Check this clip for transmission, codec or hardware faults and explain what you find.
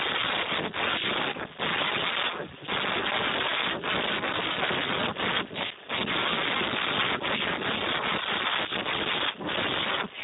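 The speech carries one fault, Speex codec damage, present from start to finish.

Throughout the clip, heavy Speex coding leaves the voice hoarse, noisy and partly robotic, and nothing remains above 3.8 kHz. At a rate this low, which points to a setting near 4 kbps, the CELP coder has very few bits for the excitation signal. The pitch pulses and fine detail are replaced by coarse approximations, pushing the sound toward a vocoder-like buzz. The missing upper band makes the audio dull and narrow.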